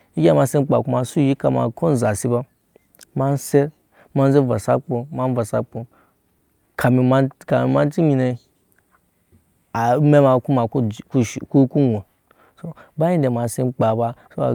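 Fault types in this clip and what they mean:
No technical faults are audible.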